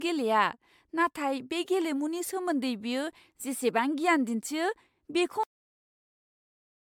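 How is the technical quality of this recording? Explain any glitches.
The recording has two clear technical faults: a degraded, smeared texture throughout, and an abrupt stop well before the end.

Generation loss runs the whole way through. The speech sounds swirly, hollow and smeared, with softened consonant attacks and nothing above about 19.9 kHz. That is likely the result of roughly ten successive MP3 decode-and-re-encode passes. The sound fits rates near 112 to 114 kbit/s. Each pass requantised on a shifted frame grid, so the artefacts accumulated.

A cut-off end occurs at 5.43 s. The speech is chopped mid-sound and drops straight to digital silence with no decay. The silence continues to the end of the clip. The final buffers were never written, so the audio simply stops rather than fading out.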